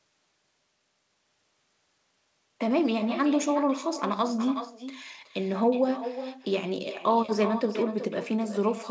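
From the start to the end of the speech, every phrase returns as a fainter, thinner copy about four tenths of a second later, at about 11 dB below the original. This is echo with no canceller. The far end's loudspeaker feeds its microphone, and nothing removes the returning signal.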